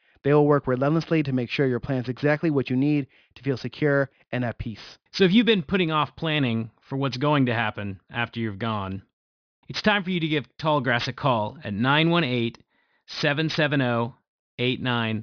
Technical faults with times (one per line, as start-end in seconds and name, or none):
0.00-15.22 aliasing